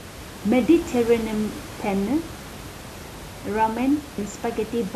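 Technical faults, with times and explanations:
4.18 s, compressed frames skipped: the audio jumps ahead roughly 70 ms, about three frames of a 24 ms frame codec.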